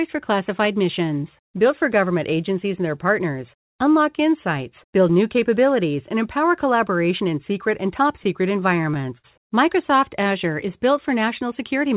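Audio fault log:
8.24 to 9.26 s, repeated stalls (stutter): six brief hitches within about a second, where packets reached the receiver late and its jitter buffer kept running dry. Each time, the last sound was stretched to cover the wait, adding about 105 ms in all, with the longest hold at 58 ms. Nothing drops out, but the sound drags and judders. It reaches the listener through a narrowband call path with nothing above 4 kHz, which fits G.711.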